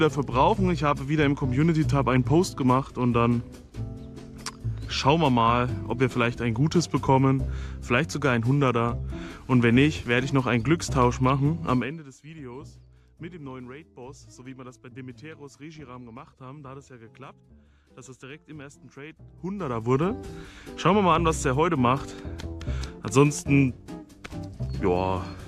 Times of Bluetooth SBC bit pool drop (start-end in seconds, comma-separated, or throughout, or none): none